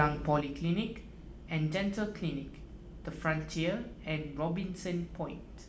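At 0.41 s the speech level drops abruptly by about 6 dB and stays down to the end of the clip. This is a one channel drop-out: most likely one side of a stereo signal was lost, so once the two sides were summed to mono, only half the shared signal remained. The waveform shows a sudden, permanent step down in envelope height, and the spectrogram dims evenly across all frequencies from that point on.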